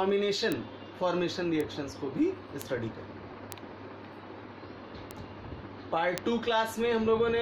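Six bit error spikes land at 0.52, 1.61, 2.62, 3.52, 5.11 and 6.18 s. Each is a single sharp tick with no connection to the surrounding sound. A flipped bit throws one sample, or three in a row at 6.18 s, off by a power of two before it snaps back. Peaks reach about -11 dBFS, or about -17 dBFS at 1.61 and 5.11 s. The waveform shows a lone needle, and the spectrogram shows a thin full-height vertical line.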